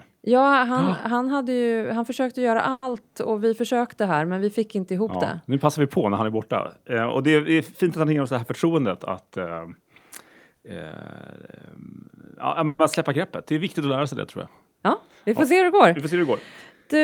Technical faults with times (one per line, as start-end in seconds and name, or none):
2.71-2.85 call audio freeze
9.21-9.82 jitter buffer speed-up
12.67-12.82 call audio freeze